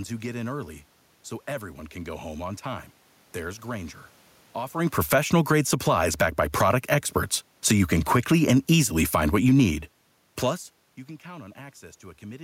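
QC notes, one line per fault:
4.76–6.88 s and 7.52–10.35 s: automatic gain falling, twice. The gain control decided the input was too loud or its background too strong and eased itself down, about 9 dB over the first stretch and about 6 dB over the second. You can tell it's the gain and not the talker because the room noise sinks right along with the speech. The talker shifting around roughly 4.5 s and again near 10.5 s is a separate, natural level change.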